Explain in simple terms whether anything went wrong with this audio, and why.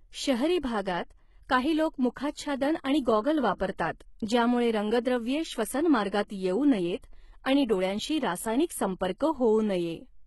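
Yes, something went wrong, and it runs through the whole clip rather than at one moment. The speech carries heavy damage from what is likely HE-AAC compression. That codec keeps only the lower range properly and fakes the top end by copying lower bands upward, so the treble isn't really the original. Here nothing survives above about 11.8 kHz, and s sounds come out gritty, metallic or a bit lispy because the rebuilt highs don't match the real ones.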